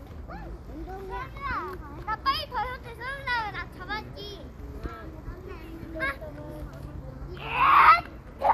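These sounds carry MP2 compression damage the whole way through, and it's plainly audible. Nothing comes through above about 14.3 kHz, so the top end sounds dull, and what's left has that gurgling, grainy texture as the upper sub-bands flicker in and out and the surviving ones get quantised coarsely. It's likely down to MPEG Layer II running short of bits, which fits a rate of around 80 kbps.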